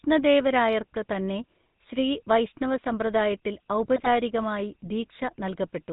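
Throughout, the speech has a buzzy, gravelly roughness with nothing above 4 kHz, plainly audible GSM full-rate codec damage from 13 kbps vocal-tract modelling. From 3.96 to 4.08 s, GSM bit errors break the speech into squawks and gargling as corrupted filter, pitch and gain values distort a few frames.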